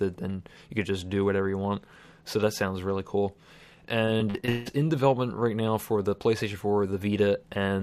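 The audio breaks up from 4.05 to 4.68 s with repeated packet loss, giving a robotic sound. Around six holes, the longest 165 ms, are patched by stretching the previous sound, so nearly half the stretch is synthetic. Unlike a single dropout, it chops and buzzes repeatedly.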